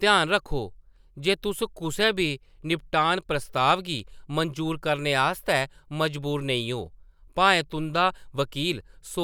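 Two sharp, isolated clicks cut through the speech, at 2.01 s and again at 3.99 s, each a single hairline tick with nothing missing around it. They are likely dropped samples: a fraction of a millisecond of the stream vanishes, so the waveform jumps abruptly to a later value.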